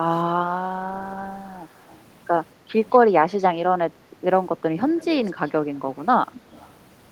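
Speech with an echo leak: faint copies trail about 226 ms behind, about 25 to 35 dB down, at 1.77–2.02, 2.91, 4.97–5.05, 5.26–5.51 and 6.33–6.71 s. Likely an echo canceller missing loudspeaker pickup.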